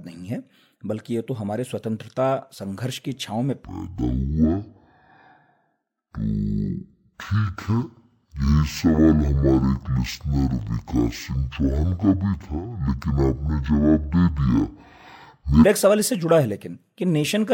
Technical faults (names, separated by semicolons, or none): stereo read as mono